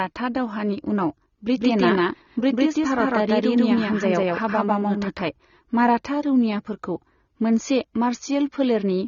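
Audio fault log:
Throughout, AAC compression: the speech sounds dull and smeared, with nothing above about 6.9 kHz and a fizzy, warbling texture on sibilants. This is likely low-bitrate AAC-LC, which fits roughly 24 kbps, cutting high frequencies and coarsely quantising what remains.
1.57 to 5.21 s, doubled audio track: just after "दावहानि उनाव", a second full-band copy of the speech, about as loud as the original, trails it by roughly 150 ms. It starts and stops abruptly with no decay or room colour, likely from a second, slower capture path.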